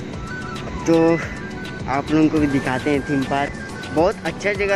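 From 0.66 to 0.69 s there is damaged data in the compressed stream. Corrupted bytes there made the decoder misread its frames, lose sync and skip forward to the next valid frame header.

At 3.09 s the waveform freezes flat for about 0.67 ms and then resumes. This is an underrun with held sample. The output buffer ran dry, so the converter held its last value, and a sliver of audio under a millisecond was lost.

From 3.45 to 3.49 s the same damaged compressed data recurs as a second short fault, again caused by the decoder losing frame sync.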